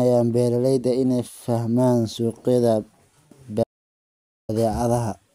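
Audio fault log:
3.64–4.49 s, audio dropout to silence: the speech cuts off abruptly and about 0.85 s of silence follows, with no room tone, before the speech resumes mid-flow. The input was likely lost while recording continued, writing silence in its place.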